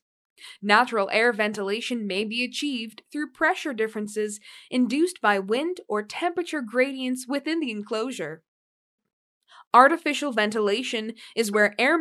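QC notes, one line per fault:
11.53 to 11.55 s, corrupt frame decoded: a couple of compressed frames arrived with flipped bits, and the decoder played them rather than concealing them. The damaged data sets the wrong band gains and misreads the spectral codes, so energy lands at frequencies the sound never had. The result is a short chirp, squeak, blip or burst of noise lasting about 25 ms, roughly the span of the damaged frames, that peaks at about -25 dBFS and cuts across the audio near the end.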